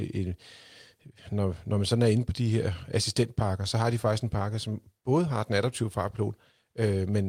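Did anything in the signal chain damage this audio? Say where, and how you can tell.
No, nothing in the chain audibly damaged this speech.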